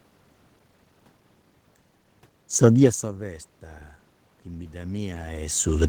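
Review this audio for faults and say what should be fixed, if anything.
From 4.5 s to the end at about 5.9 s, the voice and the room noise behind it swell up together, gradually rather than in a jump. This is automatic gain rising. The input level fell by about 18 dB, and the gain control treated that as a too-quiet signal and raised its gain slowly to compensate, lifting the background along with the voice. The talker also moves around 5 s, as an earlier shift near 2.5 s also changes the level. To prevent it, slow or cap the automatic gain control, or fix the gain manually and keep the talker at a steady distance from the microphone.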